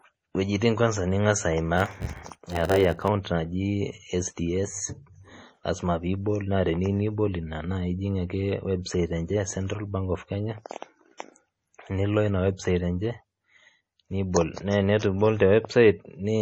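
Heavy MP3 compression, likely at a low bitrate around 32 kbps, runs through the whole speech clip. The treble is cut, and weak frequency lines drop in and out from frame to frame, giving a watery, swirly texture with metallic chirps on s sounds and smeared attacks.

From 1.76 to 3.09 s there is a block size mismatch (padded): one stage writes blocks shorter than the next stage reads, and zeros fill the remainder. The gaps repeat as a 91.9 Hz buzz, and the audio slows to 0.919 times its normal speed with its timbre intact.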